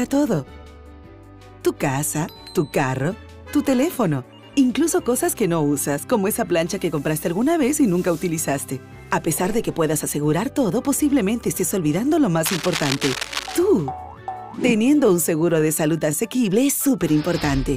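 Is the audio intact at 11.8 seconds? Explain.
Yes, the audio is intact at 11.8 s, with no dropout, click, distortion or other fault at that moment.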